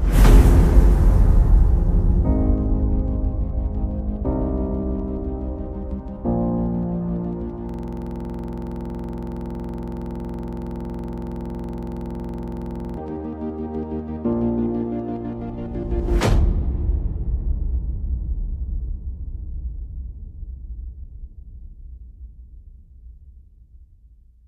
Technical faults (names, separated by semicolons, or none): system hang loop